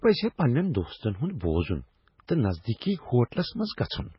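Throughout, the speech sounds watery and swirly with nothing above 5.5 kHz, heavy damage that fits a very low bitrate and is likely MP3 compression; flickering lines distinguish it from plain filtering.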